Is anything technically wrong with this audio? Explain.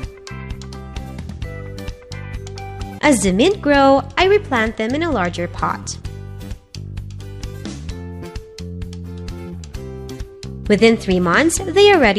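No, nothing technically wrong is audible anywhere in this recording.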